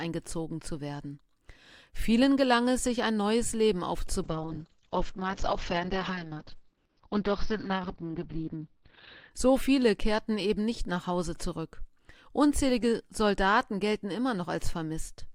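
From 4.25 to 9.37 s there's a call bitrate drop: the audio turns rough and watery and goes muffled as the top end falls from 20 kHz to about 6 kHz for roughly five seconds. That fits the encoder being squeezed from around 64 to 7 kbps.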